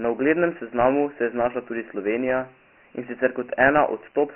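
Dialogic VOX ADPCM runs throughout the speech. Each sample is coded as a coarse 4-bit step from the last, which fits 24 kbps at 6,000 samples a second. Nothing survives above 3 kHz, and heavy quantisation leaves a gritty hiss tracking the speech.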